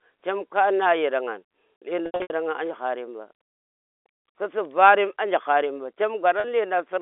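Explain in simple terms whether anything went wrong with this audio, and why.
Packet loss with pitch repetition occurs twice. Between 2.06 and 2.30 s, chunks of audio were lost, 200 ms in total with the longest gap 80 ms. Each time, the receiver filled the hole by looping the last bit of voice pitch and fading it, so short gaps sound briefly buzzy and the longest gap fades into silence. At 6.40 to 6.44 s, a shorter 40 ms loss is bridged the same way and sounds like a slightly held tone. The telephone-band sound itself comes through the phone coding as expected.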